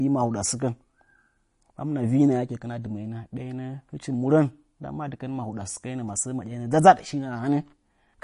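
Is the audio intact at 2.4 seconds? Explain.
No, the speech at 2.4 seconds, as throughout, sounds watery and swirly with nothing above 10.5 kHz, likely MP3 compression at a starved bitrate near 40 kbps zeroing weak frequency lines.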